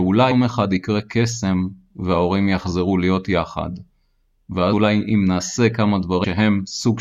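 Speech with compressed frames skipped at 0.30 s, 4.72 s and 6.23 s. At each point the audio jumps forward with no silent gap, losing about five frames (roughly 150 ms) at the first two and about seven (roughly 200 ms) at the third. Unlike a dropout or a buffer click, nothing pauses. The 26.1 ms step fits 1152-sample frames at 44.1 kHz.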